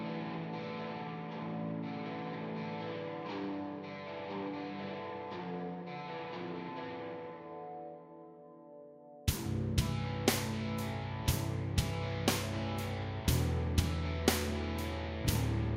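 No technical faults can be heard anywhere in this recording of sounds.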